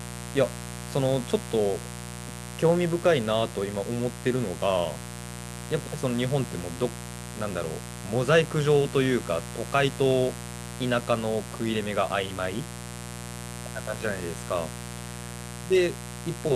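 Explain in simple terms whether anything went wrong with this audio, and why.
There's a mains buzz under the speech from start to finish, a steady, raspy hum that's fairly loud compared to the voice. It comes from 60 Hz power leaking in through something like a dimmer or poor shielding, with sharp spikes stacking up overtones.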